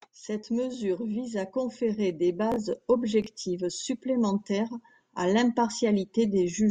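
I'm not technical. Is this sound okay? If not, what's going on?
No. Twice, at 2.52 to 2.56 s and 3.22 to 3.26 s, the speech briefly jumbles: chunks out of order. A sliver about 21 ms long plays one slot late. Unlike a dropout, nothing is missing; the pieces are just swapped.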